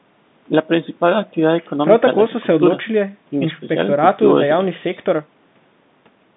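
Nothing stood out on listening to this speech beyond the narrow telephone band expected of a fixed-line call.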